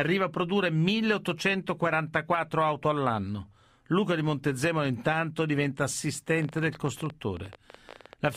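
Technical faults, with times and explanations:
6.39–8.36 s, train of clicks: just after "intanto diventa", there's uneven ticking at about 14 a second, roughly thirty clicks poking above the speech, likely from nearby interference.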